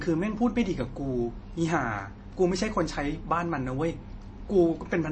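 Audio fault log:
Throughout, MP3 compression: the speech is plainly damaged, with nothing above 8.3 kHz and a watery, swirling texture. The likely cause is an encoder starved of bits, as at about 32 kbps, cutting the treble and dropping weak frequency lines that flicker frame to frame.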